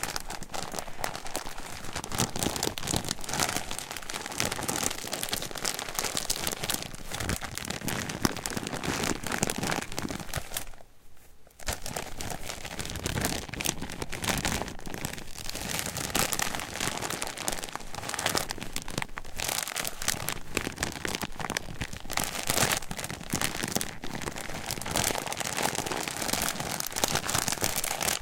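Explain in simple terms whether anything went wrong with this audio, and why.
Nothing went wrong with this audio, since no fault can be heard anywhere in it, so there is no cause to explain.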